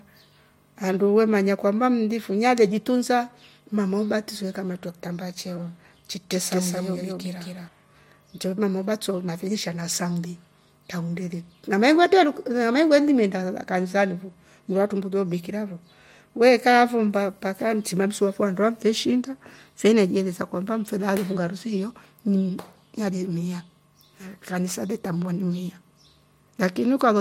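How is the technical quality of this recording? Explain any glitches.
There's one glitch worth flagging. From 6.30 to 7.68 s the speech has a doubled audio track: a second, full-band copy trails the original by roughly a fifth of a second at about the same level, with no decay or room colour. It likely comes from a second, slower capture path or two out-of-step copies in an edit, and it cuts in and out abruptly.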